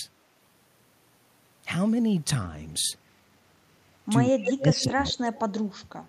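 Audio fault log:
4.31–5.36 s, speech suppressed in double talk: The echo canceller likely could not tell the near talker from loudspeaker echo while both sides spoke, so it turned the near speech down. For about a second the speech dips and breaks up, at worst falling by about 35 dB.
4.45–4.53 s, 4.81–4.86 s, 5.35–5.59 s, echo leak: Loudspeaker sound that the canceller likely missed is sent back through the microphone. Brief copies of the speech arrive 204 ms late. The first is only about 5 dB below the speech, and the later two are about 15 dB below.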